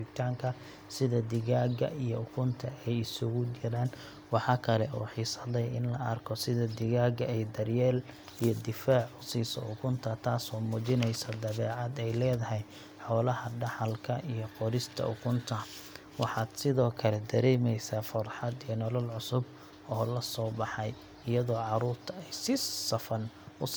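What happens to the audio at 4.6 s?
Nothing goes wrong at 4.6 s: the speech carries on intact through that moment, with no dropout, click or other fault.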